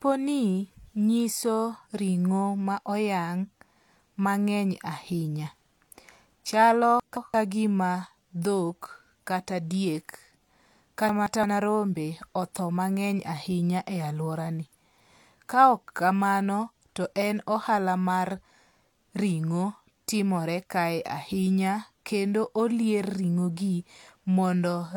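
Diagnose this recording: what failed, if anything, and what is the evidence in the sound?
Chunks out of order, at 7.00 to 7.34 s and again at 11.09 to 11.44 s. At the driver or buffer stage, a block of about 171 ms was written one block late, so each pair of adjacent blocks plays swapped. Nothing is missing, but the speech jumps back and forward over about 0.34 s each time, with three hard joins where mismatched waveforms meet.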